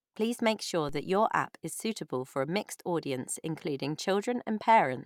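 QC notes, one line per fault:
0.89 s, DC step. Between "make sure" and "that your app is", the zero line of the waveform jumps by about -34 dBFS. The sudden shift in offset is heard as a short low thump. The speech carries on unchanged across it. The offset does not hold. It drains away through a high-pass near 2 Hz, so the waveform eases back to centre over a fraction of a second rather than stepping back.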